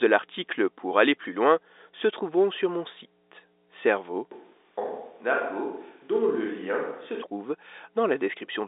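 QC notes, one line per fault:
Throughout: mains hum. A steady 60 Hz tone, with low harmonics above it, sits under the whole clip at about 25 dB below the speech. It comes from the power line leaking into the signal through a ground loop or a nearby transformer. It never changes with the speech's level and holds a fixed pitch, so it is a tonal hum rather than broadband rumble or handling noise. Its 60 Hz fundamental points to a 60 Hz mains supply.
4.31 to 7.23 s: switch to a distant microphone. At 4.31 s the speech suddenly turns roomy and hollow and drops by about 5 dB. Room noise rises to roughly 40 dB below the speech. At 7.23 s the close sound snaps back. The likely cause is that the close microphone dropped out and a farther one, such as a camera's, carried the signal. Both edges are abrupt, which rules out added reverb or a gradual fade. The telephone-band limit above 3.8 kHz stays the same on both sides.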